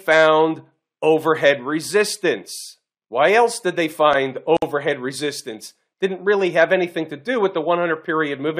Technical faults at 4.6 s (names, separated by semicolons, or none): gap at a join of encoded pieces